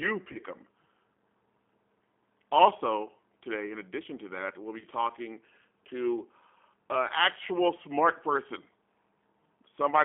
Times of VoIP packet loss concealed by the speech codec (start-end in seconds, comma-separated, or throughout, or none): 0.32-0.39, 4.79-4.85